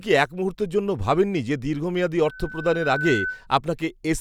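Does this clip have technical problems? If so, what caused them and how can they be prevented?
Yes. Loudspeaker feedback squeal from 2.25 to 3.47 s: a 1.5 kHz tone swells over most of a second until it is as loud as the speech. The microphone is picking up its own loudspeaker and the loop's gain exceeds one at that frequency. Unlike a steady interfering tone, it grows by itself. To prevent it, reduce the gain or move the microphone away from the loudspeaker, or notch 1.5 kHz.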